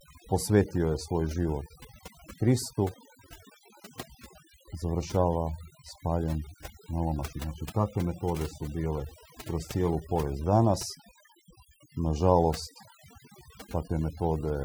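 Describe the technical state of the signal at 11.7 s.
At 11.7 s the speech carries overdone noise removal, present throughout. Over-strong noise reduction cuts bands near the noise estimate, leaving twinkling specks.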